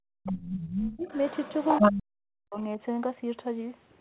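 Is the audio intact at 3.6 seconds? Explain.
Yes, the speech is intact at 3.6 seconds, with no fault at that moment.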